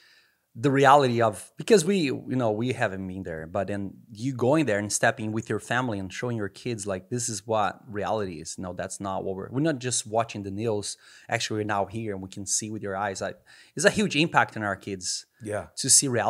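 No technical faults are audible.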